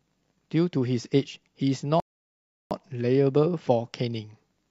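A rebuffering stall runs from 2.0 s to 2.71 s. The player exhausted its store of downloaded audio and had to halt until fresh data arrived, so the speech drops abruptly into silence for roughly 0.71 s. When playback restarts, it picks up from the exact point where it broke off: no speech is skipped or repeated, but the gap stretches the clip's timeline by that 708 ms pause.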